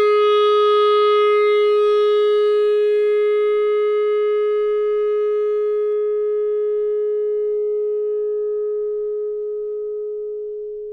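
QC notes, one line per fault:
5.92–10.93 s, channel delay (comb filtering): one channel lags the other by a tiny fraction of a millisecond, which fits a delay of about two samples. The mono sum cancels near 10 kHz, dulling the top. Unlike a low-pass roll-off, this is a fixed notch, not a gradual slope.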